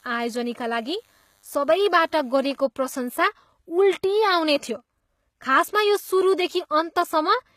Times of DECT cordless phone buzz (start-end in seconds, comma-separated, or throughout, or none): 0.00-2.62